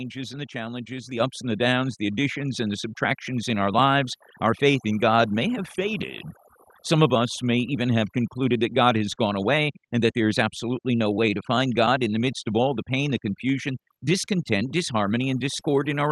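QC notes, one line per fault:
Throughout: overdone noise removal. The noise reduction is set so aggressively that frequency bands near its noise estimate are pulled down or switched off, taking quiet speech detail with them. The background becomes near silence dotted with twinkling specks.
1.2 s: microphone volume stepped up. Between "and the challenges the" and "ups and the downs", the level jumps by about 7 dB in one step. Voice and background rise together because automatic gain control raised the device input volume mid-sentence.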